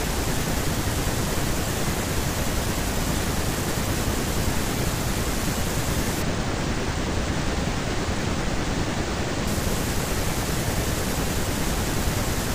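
From 6.22 s to 9.47 s, one channel of the speech runs late by a tiny amount, a couple of samples or a few hundredths of a millisecond, before both are folded to mono. That channel delay produces comb filtering. Because the offset is so short, the first cancellation lands high, around 10 kHz, so the top end thins and the speech turns dull for those three seconds.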